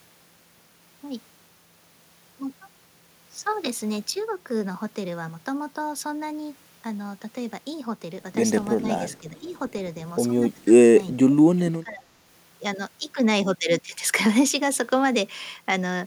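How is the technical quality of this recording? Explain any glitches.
The recording has audible call-processing glitches in the second half, grouped between about 8.8 and 12.0 s.

Speech suppressed in double talk: at 8.81–9.03 s and 9.20–9.47 s the speech dips slightly, then more noticeably. At 11.14–11.38 s and 11.71–12.04 s it drops deeply, nearly cutting out. This is likely an echo canceller ducking the talker while the far side also spoke.

Echo leak: at 9.10–9.14 s a very faint scrap of delayed speech, about 412 ms behind, slips through, likely residual loudspeaker echo the canceller failed to remove.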